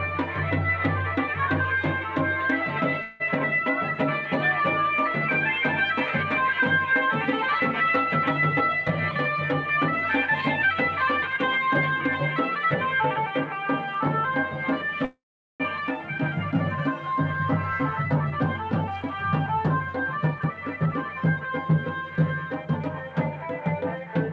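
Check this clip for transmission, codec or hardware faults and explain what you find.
Two kinds of fault are audible: two call audio freezes and two stretches of jitter buffer speed-up. Nothing is heard above 8 kHz, which fits a G.722 call path.

Call audio freeze occurs at 3.02 to 3.22 s and at 15.05 to 15.62 s. Packets were likely held up, and the jitter buffer ran dry. The receiver stretched the last sound to fill the wait. The first freeze is a 180 ms fading buzz or hiss. The second fills 550 ms and falls to silence for about 420 ms. The audio then resumes where it stopped, with nothing lost, only delayed.

Jitter buffer speed-up runs from 8.53 to 11.58 s and from 17.33 to 21.44 s. The buffer held more audio than its target. The receiver removed many tiny pitch-period slices in a row to shed the excess. Pitch stays the same, but the sound hurries. The first stretch runs at 105% speed and drops roughly 150 ms. 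The second runs at 113% and drops about half a second, so it sounds noticeably rushed.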